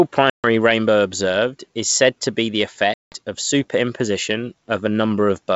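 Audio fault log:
0.30–0.48 s and 2.94–3.16 s, packet loss on an ADPCM call: Hard-edged silent gaps of about 140 ms before "rainbow observed is said" and 180 ms after "said to be the", fitting roughly seven and ten lost packets. The G.722 decoder's predictor and step size drift from the sender's. Sound resumes slightly distorted and settles within some tens of milliseconds.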